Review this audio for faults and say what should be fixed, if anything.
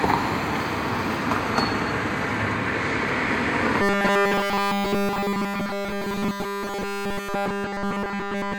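Robotic sound from repeated short buffers runs from 3.82 s to the end at 8.58 s. The sound becomes a rigid metallic buzz at 200 Hz, likely because new audio arrived too slowly and a roughly 5 ms buffer was replayed almost continuously while real audio was skipped. To prevent it, enlarge or stabilise the playback buffer so fresh audio arrives in time.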